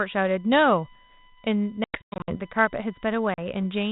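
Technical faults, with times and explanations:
Throughout: USB whine. A steady 1 kHz tone sits under the speech at roughly 30 dB below it and does not follow the speech's pitch or level. It comes from the USB bus drawing current in regular 1 ms frames. That pulsing current leaks into the audio path through shared power or ground, so it is heard as a fixed whine at the frame rate.
1.84 to 2.36 s and 3.34 to 3.39 s: packet loss on an ADPCM call. In the first stretch, about 300 ms of audio drops out in hard-edged holes scattered over 440 ms, with the longest gap 100 ms, which points to roughly fifteen lost packets. The second is a single 40 ms hole. Because the G.726 ADPCM decoder fills the gaps with silence, its adaptive predictor and step size drift from the sender's. The speech therefore resumes slightly distorted, with brief roughness until it resynchronises.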